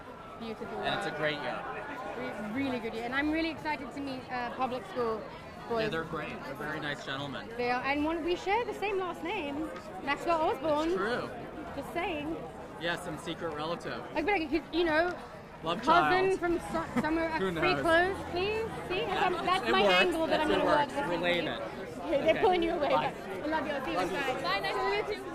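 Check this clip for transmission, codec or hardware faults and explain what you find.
There is one fault, running throughout the clip: a filter restarted on every block. Its state is reset each block, so a small transient opens every one. This produces a level-following 375 Hz buzz, consistent with 128-sample blocks. A spectrogram shows evenly spaced 375 Hz harmonics, and the waveform shows regular ticks.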